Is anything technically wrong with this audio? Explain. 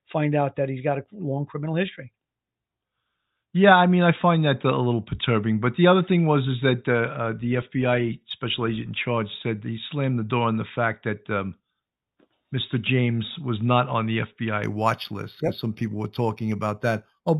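Yes. From 14.64 s to the end, there is imaging from linear upsampling. The highs are dulled and a faint metallic shimmer, about 25 dB down, sits at 4 to 8 kHz, fitting 8 kHz audio raised to 48 kHz by straight-line interpolation. Unlike aliasing, the shimmer mirrors the band upward rather than folding tones down.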